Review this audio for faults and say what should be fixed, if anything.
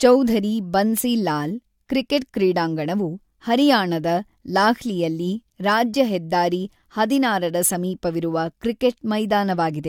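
Nothing to fix: no faults found anywhere in the speech recording.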